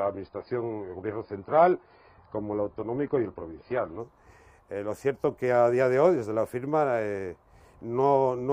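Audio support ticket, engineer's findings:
0–4.0 s: nothing above 5 kHz, codec smear. Adaptive stream starting at a low bitrate; fits 16 kbit/s AAC. Jumps up at 4.0 s, gapless.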